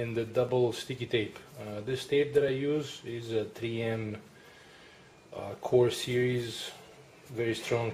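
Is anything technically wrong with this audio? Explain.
Yes. Regular ticks recur every 2.0 s, from 0.49 s to 6.51 s. These are periodic USB or driver dropouts: something stalls the bus or driver on a fixed cycle, and each time roughly a couple of milliseconds of audio are skipped outright. The jump in the waveform clicks wherever sound is present.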